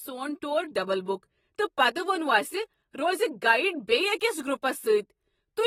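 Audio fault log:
Throughout: AAC compression. The speech carries plainly audible codec damage: nothing is present above 16.1 kHz, and the remaining spectrum sounds thinned and smeared, with a watery, fizzy edge on sibilants and held vowels. This is likely AAC-LC coding at a low bitrate, which fits roughly 24 kbps. Too few bits per frame force the encoder to discard the top band and quantise the rest coarsely, leaving gaps that shift from frame to frame.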